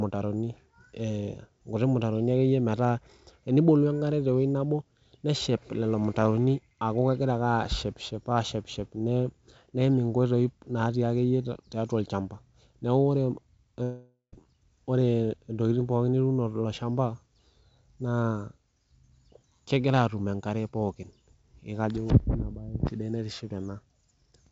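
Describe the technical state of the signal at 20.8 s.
At 20.8 s the speech is intact, with no dropout, glitch or distortion, only the band-limited sound of the G.722 call path, which carries nothing above 8 kHz.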